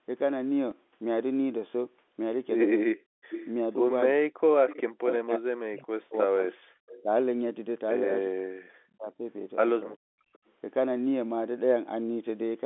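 At 0.71 s there is a small blip. This is packet loss with the last packet repeated. About 10 ms of audio went missing, which fits a single lost packet, and the receiver replayed the previous packet.

From 2.83 to 3.2 s the speech dips by up to about 40 dB. This is speech suppressed in double talk. The likely cause is an echo canceller that could not tell the talker from the far side's echo, so it turned both down. The same dipping returns from 4.14 to 7.11 s, 8.27 to 9.25 s and 10.01 to 10.1 s.

From 3.3 to 3.48 s a delayed copy of the speech appears, about 10 dB below it. This is an echo leak, with a delay of 353 ms. One side likely played the call on a loudspeaker and its echo canceller missed part of it. The echo returns from 4.68 to 5.15 s at about 10 dB down. It comes back from 6.89 to 7.02 s at about 25 dB down, and from 10.33 to 10.51 s at about 35 dB down with a 380 ms delay.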